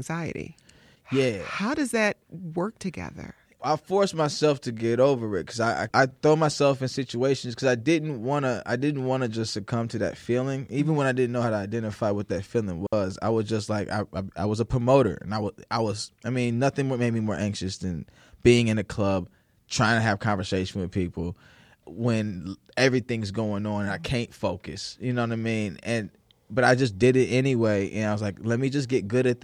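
At 12.87 to 12.93 s, between "identify what that feeling" and "I was just like", a digital wireless dropout mutes the speech for about 61 ms: a clean, noise-free hole as the receiver drops corrupted data.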